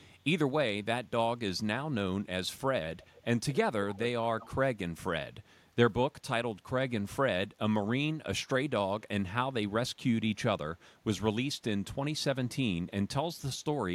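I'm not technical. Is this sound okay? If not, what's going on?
No. Faint, delayed repeats of the speech come back at 0 to 0.13 s, 3.02 to 3.22 s, 3.49 to 3.57 s, 3.94 to 3.99 s and 4.4 to 4.5 s, lagging about a quarter second behind. This is echo leak, likely from a loudspeaker whose sound was picked up and sent back.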